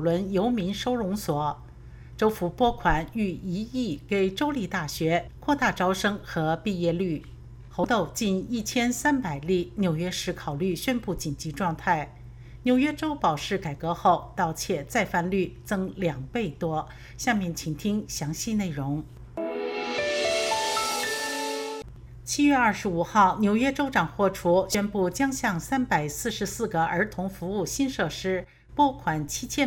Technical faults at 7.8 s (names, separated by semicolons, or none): damaged data in a compressed stream